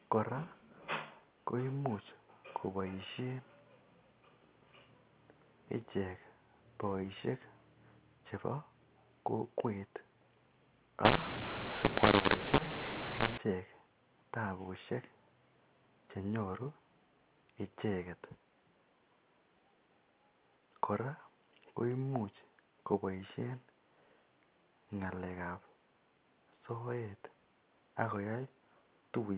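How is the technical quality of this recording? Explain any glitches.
The recording has one clear glitch, heard through an 8 kHz G.711 telephone path that passes nothing above 4 kHz.

From 11.05 to 13.38 s there is a mu-law and A-law mix-up. A-law-coded samples are decoded with the mu-law curve, so levels land on the wrong steps. The speech turns harsh and gritty, and pauses fill with noise. Unlike clipping, soft passages and silences are distorted too.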